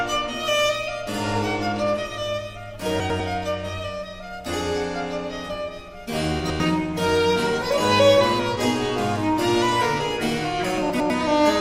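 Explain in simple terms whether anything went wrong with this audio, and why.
Something did go wrong, three times: at 3.0 to 3.2 s, 6.4 to 6.6 s and 10.9 to 11.1 s the sound has chunks out of order. Each time, a tenth-of-a-second piece arrived one piece late and plays after the piece that should follow it, so the moment sounds briefly jumbled. Unlike a dropout, nothing goes missing, and unlike a stutter, nothing repeats. The same sound is simply shuffled.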